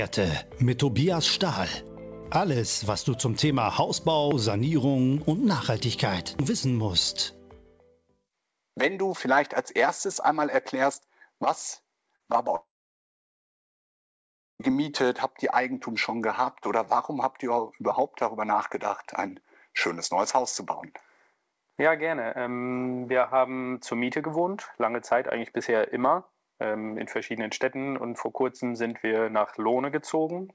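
The audio comes through a call path with nothing above 8 kHz, consistent with a wideband G.722 codec. At 12.16 to 12.23 s, short concealed packet loss leaves a brief smear where about 40 ms was patched by continuing the previous sound. From 12.56 to 14.62 s, the sound turns to a fading buzz, then about 1.9 s of silence, before resuming later. This is likely a long network dropout, with roughly two seconds never played.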